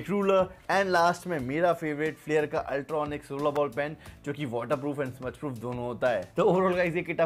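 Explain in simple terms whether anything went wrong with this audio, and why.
There's one problem, at about 3.56 s: a sharp snap sitting on top of the sound. It's an electrical switching spike. A nearby switch, motor or static discharge likely sent a brief arc into the audio line. It's short and fairly quiet.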